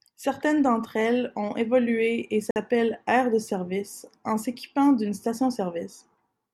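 A Bluetooth stall at 2.51 to 2.56 s cuts the speech to silence for about 51 ms, right after "elles ont évolué et" and before "aires de service en". The audio stops dead and then resumes without a fade. The likely cause is radio interference delaying packets on the wireless link, so the headphones' buffer ran empty and playback waited until the resent data arrived.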